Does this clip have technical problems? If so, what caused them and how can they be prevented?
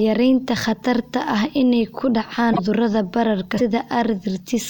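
Yes. The speech skips ahead at 2.52 to 2.59 s, just after "ah inay ku dhacaan", and again at 3.57 to 3.61 s. This is likely a broken MP3 bit reservoir. Frames of about 26.1 ms were lost, so the following frames decoded borrowed bytes from the wrong data. Prevent it by cutting or streaming MP3 only at frame boundaries that keep the reservoir intact.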